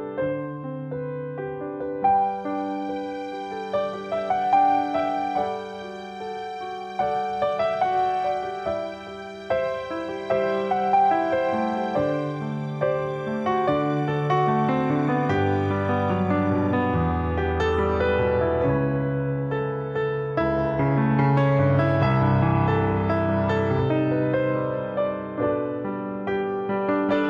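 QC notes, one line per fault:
18.00–27.30 s adaptive stream at a lower bitrate: sudden switch with no gap, then more artefacts, which fits HE-AAC at about 32 kbit/s.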